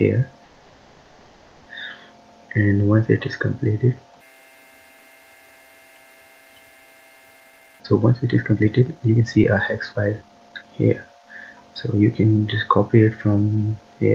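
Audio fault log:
0.45–1.68 s, call audio freeze: sound stalls into a fading buzz or hiss for 1.21 s, likely delayed packets emptying the jitter buffer; playback then resumes where it stopped, nothing lost.
7.40–9.52 s and 9.92–12.24 s, jitter buffer speed-up: sound hurries at unchanged pitch, 135% then 119% speed, as short pitch-period slices are cut to shed roughly 0.7 s and 0.5 s of excess delay.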